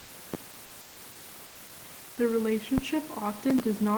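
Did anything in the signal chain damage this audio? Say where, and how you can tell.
Yes. In the call processing and codec stage, the pauses at 0.00–0.08 s, 0.81–0.96 s and 1.46–1.55 s lose the room's natural texture and turn into a flat, featureless hiss, about 1 to 3 dB quieter than the real background it replaces. That is comfort noise in place of the background, likely from Opus discontinuous transmission: the sender stops sending during silence and the receiver synthesises roughly matched noise until the sound resumes.

At 2.78–2.87 s there is a deep, short thump that dies away in about 20 ms. This is a phantom power thump from the analogue wiring stage. A supply switched on or off on a live input sends a voltage step through the coupling capacitors, and the preamp reproduces that step as a low-frequency knock.

From 3.40 to 3.60 s a gritty crackle rides on the sound and then stops. 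This is processor overload crackle in the driver and buffer stage. Several buffers missed their deadlines in a row, with the pattern fitting roughly 5 ms buffers and around five misses. Each miss replayed a scrap of old audio with hard edges, and those discontinuities run together as tearing.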